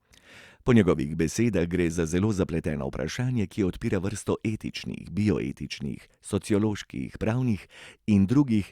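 Nothing here calls for comment, since the recording runs along without any technical trouble to point out at any moment.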